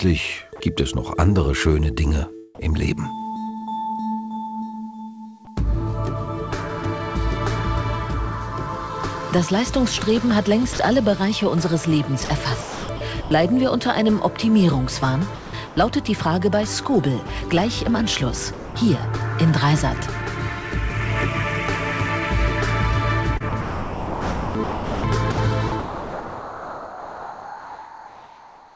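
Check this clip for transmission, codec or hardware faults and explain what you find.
Two kinds of voice-detector fault are audible, both heard through a G.722 call path at 64 kbps with nothing above 8 kHz.

Sound dropped by the voice detector, at 0.56–0.60, 10.73–10.79, 17.27–17.29 and 18.53–18.75 s: each is a single gap of 20 to 220 ms filled with steady comfort noise. The sender's detector likely mistook the sound for background and stopped sending.

Sound chopped by the voice detector, at 12.25–13.31, 15.35–15.77 and 23.37–28.76 s: each stretch has several holes rather than one. Replaced time is 460 ms, 280 ms and about 4.5 s, the holes alternating with real sound. The likely cause is a detector switching sending on and off repeatedly.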